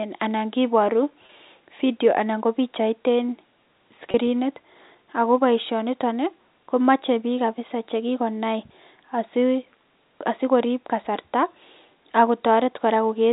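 At 1.26 to 1.29 s, just before "video anan kobichait een", and again at 4.11 to 4.14 s, there is packet loss with pitch repetition. About 30 ms drops out each time, which fits a single lost packet. The receiver fills the gap by repeating the last pitch period, producing a brief buzzy hold. On the waveform the cycles repeat as they fade. On a spectrogram the harmonics freeze flat within the 4 kHz G.711 telephone band.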